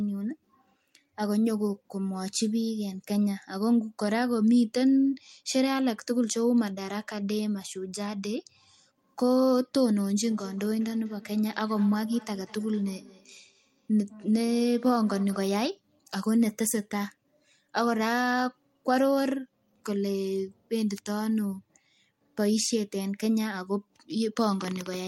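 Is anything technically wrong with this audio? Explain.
Yes. From 10.24 to 15.71 s there is feedback echo between two devices: another device replays this microphone back into it, so each word recurs roughly every fifth of a second, ringing, about 21 dB down.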